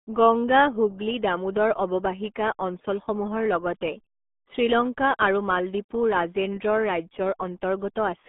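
RealAudio 14.4 codec damage runs from start to finish: the speech has passed through the old RealAudio 1 dial-up codec, and the heavy, gargly smearing fits its 8 kbit/s rate. Almost nothing survives above 3.8 kHz, and the usable band sits roughly between 200 Hz and 3.5 kHz, so the voice sounds muffled and boxy. With so few bits per second, the coder rebuilds each stretch of speech crudely, leaving a bubbling, watery texture on every syllable.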